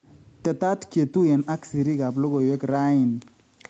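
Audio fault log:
throughout: echo with no canceller. Each phrase returns about 150 ms later as a faint, thin copy about 28 dB below the speech. The far-end loudspeaker fed its microphone, and nothing cancelled that before it came back over the 8 kHz-limited call path.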